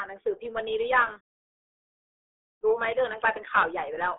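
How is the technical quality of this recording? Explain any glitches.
Poor throughout: the entire clip has passed through the RealAudio 14.4 codec. Its low-rate speech coding, consistent with an 8 kbit/s stream, removes everything above 3.8 kHz, leaving speech heavily muffled and gargly from start to finish.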